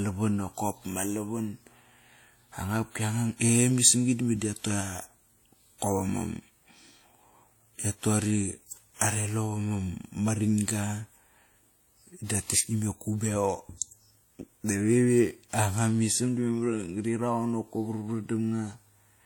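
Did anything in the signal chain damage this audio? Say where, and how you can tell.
Yes, at the codec stage: the speech carries mixed, layered smearing throughout, with nothing above 18.5 kHz, likely from transcoding between lossy codecs, WMA then HE-AAC.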